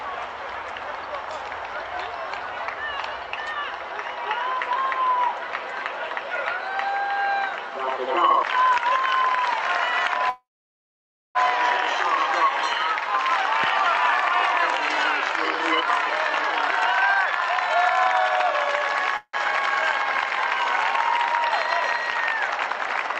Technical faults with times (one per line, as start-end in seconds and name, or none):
10.29-11.37 call audio freeze
13.64-13.66 loud pop
14.48-15.08 jitter buffer speed-up
15.81-17.76 jitter buffer speed-up
19.17-19.35 call audio freeze